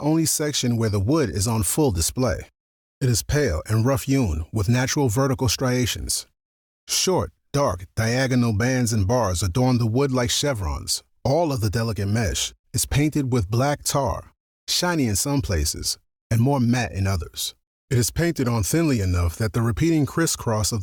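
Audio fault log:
Nothing to log here; I listened all the way through and didn't hear any problems.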